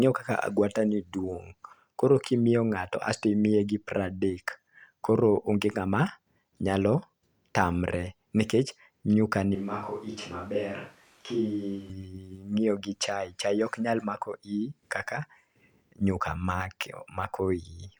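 Switch to a distant microphone, 9.55 to 11.90 s: the speech abruptly turns roomy and thin, about 10 dB quieter, likely because the close microphone failed.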